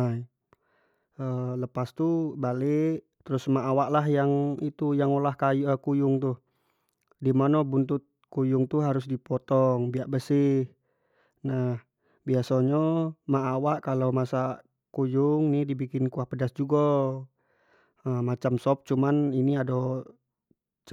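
No technical faults are audible anywhere in this speech recording.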